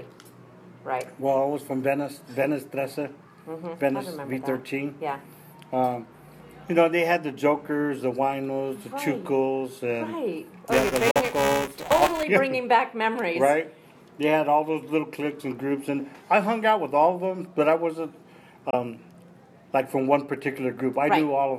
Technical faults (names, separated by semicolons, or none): buffer tearing; Bluetooth dropout